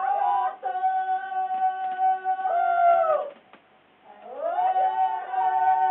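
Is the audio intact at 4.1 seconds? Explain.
Yes, the audio at 4.1 seconds plays through intact, with no dropout, click or other fault at that moment.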